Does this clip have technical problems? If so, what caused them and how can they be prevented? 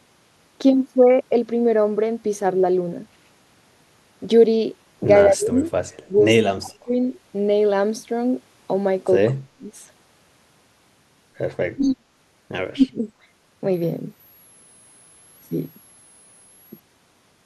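Yes. The speech dips or breaks up in six places: 5.27–5.63 s, 5.99–6.16 s, 6.56–6.95 s, 9.31–9.69 s, 11.75–12.03 s and 12.74–13.08 s. Each lasts roughly 150 to 400 milliseconds and drops by roughly 20 to 40 dB. This is speech suppressed in double talk, likely from an echo canceller that ducked this talker while the far side spoke. Better acoustic isolation or a headset prevents it.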